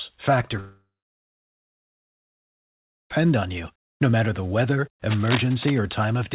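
From 0.6 s, the speech breaks into a buzzing continuation of its last sound that fades within about a quarter of a second. Near-silence follows until 3.12 s, when the speech resumes at "on you" with roughly 2.5 s missing. This is likely a long network dropout: packets stopped arriving, the receiver briefly stretched the last audio it had, then gave up and played silence.

Between 5.09 and 5.79 s, just after "matter the weather", dense, uneven scratching and rustling lies over the speech at about 5 dB below its level. This is cable scratch noise. A worn cable, connector or control being moved is the likely source, with its contact resistance jumping rapidly and spraying noise bursts into the signal.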